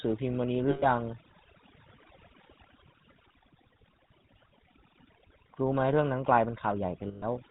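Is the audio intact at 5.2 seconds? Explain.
No. At 5.2 seconds the speech carries overdone noise removal, present from start to finish rather than at that moment alone. The noise reduction was pushed too hard, so any frequency band sitting near its noise estimate is pulled far down or shut off, and the quieter parts of the voice are swept away with it. Around 5.2 seconds the background drops and breaks up into twinkling specks.

The same moment also shows the GSM full-rate codec, again running through the whole clip, with plainly audible damage and a character that fits its 13 kbps rate. This codec rebuilds the voice from a vocal-tract model excited by evenly spaced pulses, keeping only a third of the excitation samples, and it discards everything above 4 kHz. At 5.2 seconds that leaves a dull, band-limited sound with a buzzy, gravelly roughness on the voice.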